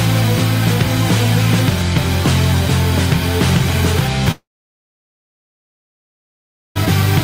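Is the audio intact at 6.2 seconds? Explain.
No. At 6.2 seconds there is only silence, part of a gap from 4.31 to 6.77 s after a brief fading buzz or hiss. This is likely a long network dropout, with about 2.4 s of audio lost.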